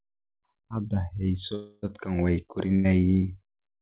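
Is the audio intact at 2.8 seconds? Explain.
No. A burst of packet loss runs from 2.75 to 2.87 s: lost packets were concealed by extending and fading the last sound over 90 ms, then about 90 ms of audio is skipped. A spectrogram shows a smeared, fading repeat ending in an abrupt jump.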